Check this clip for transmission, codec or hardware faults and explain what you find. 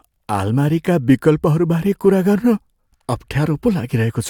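No transmission, codec or hardware faults turn up in this speech recording. Listening through it, there is no event that points to trouble in the link, the encoding stage or the capture chain.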